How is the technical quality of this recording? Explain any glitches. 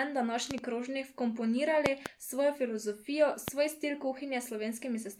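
The recording has a recurring loud pop fault, appearing three times in the speech. At 0.51 to 0.62 s and again at 1.86 to 2.09 s there is a double pop, and at 3.48 to 3.51 s a single one. The pops stand roughly 20 dB above the speech, with the second pair nearer 25 dB. The likely cause is a voltage step from static, a connector or a switch, which the downstream circuits round into a thump. Unlike a dropout click, the speech carries on underneath the pop without any gap.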